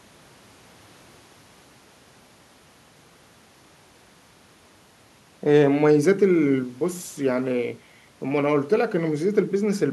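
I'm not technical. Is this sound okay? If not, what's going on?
Yes, it's fine: nothing in this recording jumps out as a problem, so there's nothing here to worry about.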